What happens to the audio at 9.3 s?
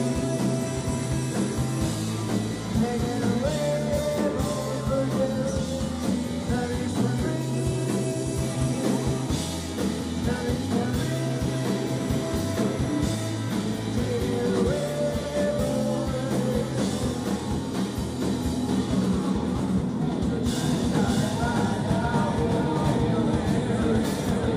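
Nothing goes wrong at 9.3 s; the audio carries on intact through that moment, with no dropout, click or other fault.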